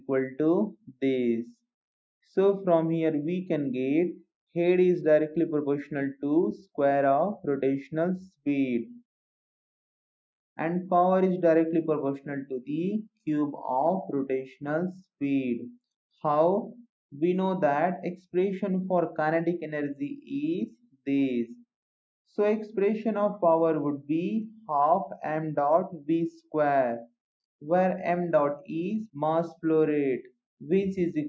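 At 0.8 to 1.02 s and again at 20.7 to 21.07 s, the sound sinks by about 18 and 19 dB: sound cut by the noise suppressor, which mistook it for noise.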